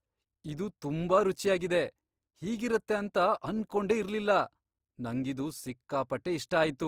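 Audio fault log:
throughout, Opus compression: the speech was likely squeezed through Opus in its music (CELT) mode at a low rate, which fits roughly 24 kbps. The band keeps full width, with nothing above about 20.3 kHz, but the encoder runs short of bits for detail. It holds each band's energy and fills the gaps with folded or noise-like content, so the damage is plainly audible as a rough, grainy texture over the voice.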